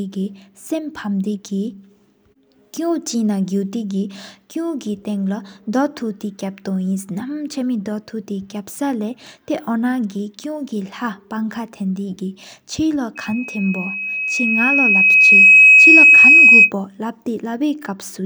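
From 13.15 to 16.72 s, loudspeaker feedback squeal: microphone-to-speaker loop gain exceeds unity at 2.5 kHz, swelling over about two seconds into a solid horizontal spectrogram line.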